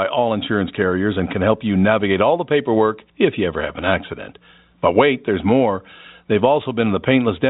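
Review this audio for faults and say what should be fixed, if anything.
Nothing needs fixing: the speech carries the usual G.711 telephone band limit, with nothing above about 3.8 kHz, and no faults are audible.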